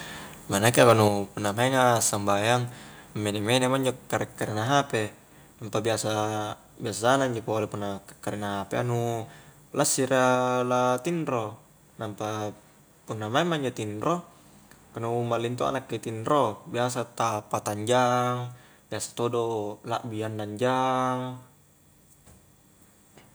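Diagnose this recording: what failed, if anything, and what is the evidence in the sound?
From 0.78 to 0.92 s, speech peaks crackle harshly, their tops flattened about 4 dB past full scale. Likely microphone overload clipping at the converter.

At 1.08 s, speech and background drop together by about 5 dB in one step. Call processing likely stepped the microphone volume down after that clipping.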